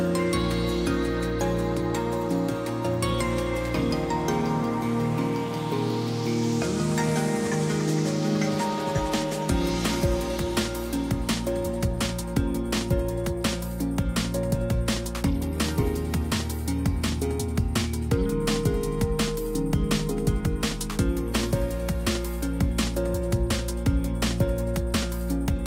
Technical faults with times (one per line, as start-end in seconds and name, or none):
none